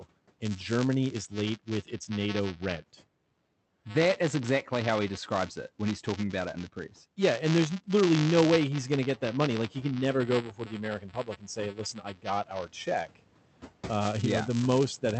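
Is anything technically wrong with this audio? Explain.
Yes, there are two faults in this speech clip.

Buffer tearing runs throughout. The writing and reading positions in the ring buffer have slipped, so each period splices in a small slice of audio from about 15 ms earlier. This gives a rattling 200 Hz buzz, which fits a period of about 5 ms, only while speech is present. A waveform shows regular discontinuities, and a spectrogram shows harmonic striping at 200 Hz intervals.

Speech cut by the noise suppressor occurs from 10.27 to 10.81 s and from 10.99 to 12.27 s. The suppressor misread parts of the speech as noise. The room noise rises by about 11 dB around 9 s, though it stays about 21 dB below the speech. Word endings and soft consonants sound swallowed, dropping by about 11 and 12 dB. The waveform shows dips in the envelope, and the spectrogram shows faded patches.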